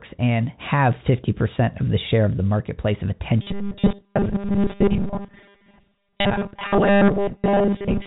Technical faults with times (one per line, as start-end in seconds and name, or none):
3.42-8.06 robotic sound from repeated short buffers